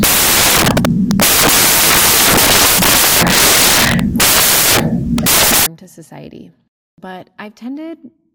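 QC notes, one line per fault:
0.00–5.66 s, samples built from the wrong bytes: the speech is buried under loud, hissing white noise, because each sample has been assembled with its bytes misread, so the rapidly changing low-order bits now form the large part of every value. Clean audio returns abruptly at 5.66 s.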